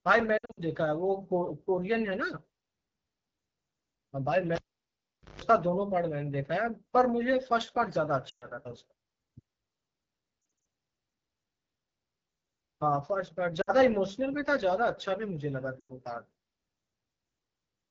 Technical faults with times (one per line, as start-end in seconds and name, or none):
0.00-17.91 AMR wideband (HD Voice) codec
0.37-0.60 lost AMR speech frames
4.55-5.42 cable pulled and plugged in
8.29-8.45 lost AMR speech frames
10.41-10.65 lost AMR speech frames
13.61-13.71 lost AMR speech frames
15.79-15.93 lost AMR speech frames